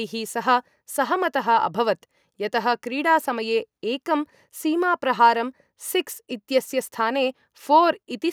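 Nothing here trips the ear at all; the speech carries on from its first moment to its last without a single technical fault to point to.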